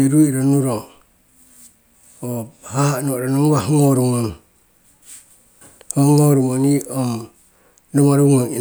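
The speech recording carries no audible technical faults anywhere in the signal.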